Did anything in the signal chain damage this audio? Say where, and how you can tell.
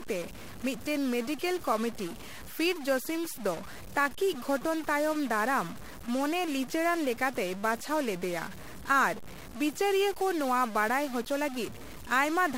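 Yes. A stuck bit runs through the whole clip, and the damage most likely comes from the converter or a digital data line feeding it. The speech carries a harsh, buzzy grit, and even the pauses are filled with steady noise instead of silence. One bit appears frozen, so about half of all sample values are shifted by a fixed step of roughly -40 dBFS. Because that bit also flips with the sign of quiet values, the low-level gaps turn into noise.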